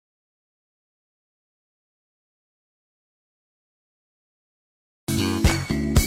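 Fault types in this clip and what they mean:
Nothing in the clip stood out as a fault on listening.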